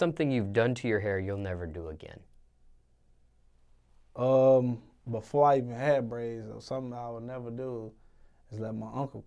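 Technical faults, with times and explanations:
No technical faults detected.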